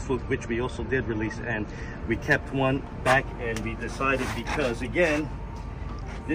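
From 0.0 s to 2.0 s the audio plays as an adaptive stream starting at a low bitrate. The player began on a cheap version to start quickly. Nothing reaches above about 8.6 kHz, so the treble is gone. Codec artefacts are heavier. The sound fits an MP3 stream near 38 kbit/s. At 2.0 s the quality jumps up with no gap, consistent with a step to about 128 kbit/s once the connection was measured.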